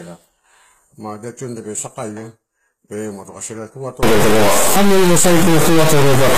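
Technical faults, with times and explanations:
Throughout: low-bitrate audio saved at a high bitrate. The speech carries the earlier codec's artefacts, with nothing above 14.9 kHz, which points to a likely earlier low-bitrate HE-AAC pass later re-encoded as high-bitrate MP3. The larger file keeps the original losses and cannot restore the missing detail.
4.03 to 6.38 s: stuck bit. From 4.03 s to the end the speech turns distorted, and quiet gaps fill with hiss. This sound is likely from one data bit stuck at a fixed value, which throws many samples off by that bit's weight and flips small values near silence.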